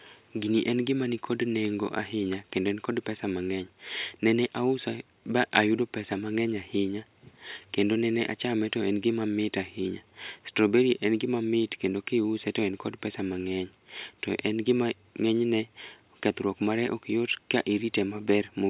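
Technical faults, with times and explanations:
No technical faults detected.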